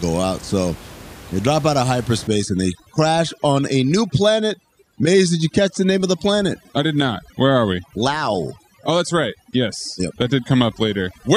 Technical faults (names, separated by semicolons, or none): overdone noise removal